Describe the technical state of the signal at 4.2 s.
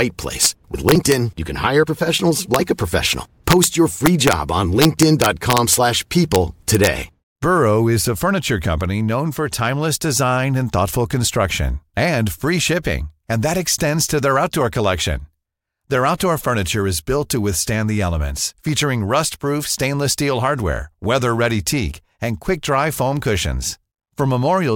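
Integer overflow from 4.06 to 4.33 s: speech peaks pushed about 1 dB past the integer limit wrap to the opposite sign, producing violent cracks sharper than clipping.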